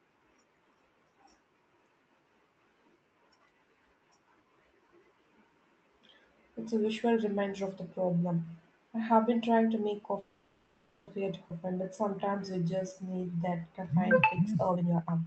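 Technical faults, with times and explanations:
10.19–11.09 s, call audio freeze: after "been trying to make", packets were likely held up and the buffer ran dry, so a fading buzz fills 0.88 s before the speech resumes with nothing lost.
11.49–11.52 s, skip ahead: roughly half a second of speech was dropped while later audio waited, so playback jumps forward with an almost direct join.
11.61–14.14 s, jitter buffer slow-down: the receiver repeated pitch periods to rebuild its reserve, adding 314 ms and slowing the speech to 88% at unchanged pitch.
14.27–15.27 s, jitter buffer speed-up: the receiver trimmed pitch periods to cut the excess delay, removing about half a second, so the speech runs hurried at 153% with unchanged pitch.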